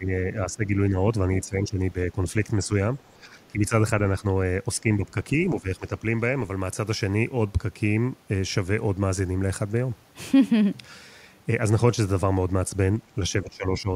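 The speech dips in level repeatedly through the first six seconds, at 0.0–0.1, 0.46–0.96, 1.44–2.19, 2.58–2.71, 3.13–4.25 and 4.81–6.04 s, and once more at 13.42–13.89 s. This is speech suppressed in double talk, likely caused by an echo canceller that could not tell the talker from loudspeaker echo and pulled both down. Most drops are about 10 dB, the one at 2.6 s only about 5 dB, and the final one about 15 dB. On a waveform the envelope sags in short notches. A spectrogram shows the speech bands fading for those spans.

Inside the 3.13–4.25 s dip, at 3.42–3.48 s, a brief scrap of the other side's voice leaking through appears, likely residual echo the canceller failed to remove from the microphone. It sits about 40 dB below the speech, so it is a barely audible fragment. On a spectrogram it shows as a faint smear of separate harmonic energy, and on the waveform it is invisible.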